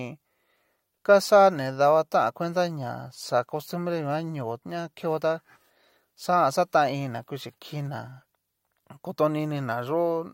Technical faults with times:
none

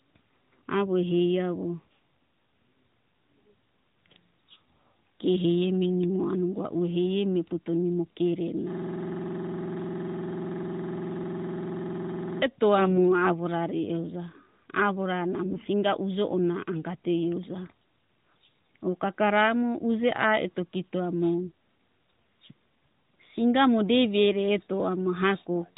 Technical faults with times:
8.73-12.42 system hang loop
12.78-13.01 AMR bit errors
15.46-15.68 AMR bit errors

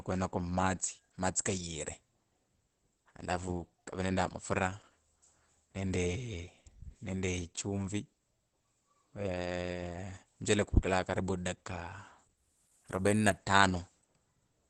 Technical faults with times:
0.00-14.70 Opus compression

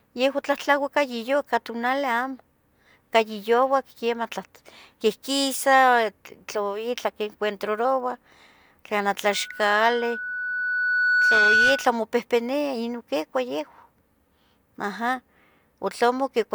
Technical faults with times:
9.30-11.98 loudspeaker feedback squeal

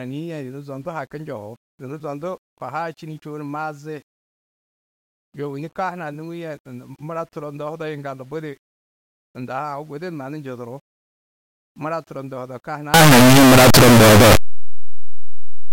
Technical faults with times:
12.94-15.73 signed and unsigned mixed up

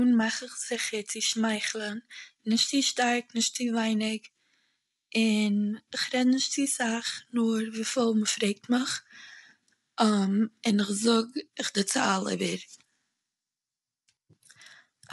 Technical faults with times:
0.00-15.13 low-delay AAC compression

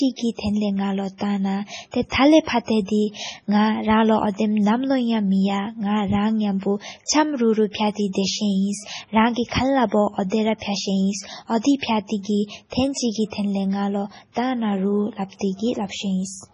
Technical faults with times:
0.00-16.54 MP3 compression
2.09-2.12 pre-echo

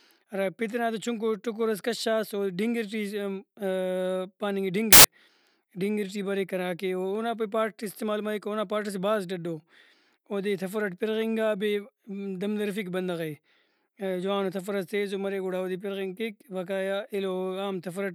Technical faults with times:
4.93-5.04 samples built from the wrong bytes

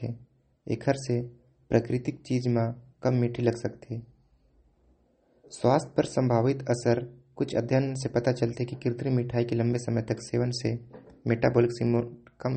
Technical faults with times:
0.00-12.56 MP3 compression

